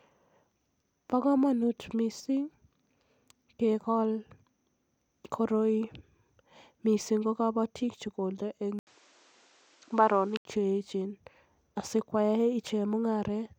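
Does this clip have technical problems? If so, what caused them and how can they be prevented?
Yes. An input switched to a poorer device from 8.79 s to 10.45 s. After an 80 ms silence, the speech loses everything above 8.7 kHz and turns duller, with new background noise sitting roughly 35 dB under the voice, though the loudness stays much the same. At 10.45 s the full band returns. The likely cause is the recording system briefly changing to another microphone with a narrower response. Locking the input to one chosen device and disabling automatic device switching prevents this.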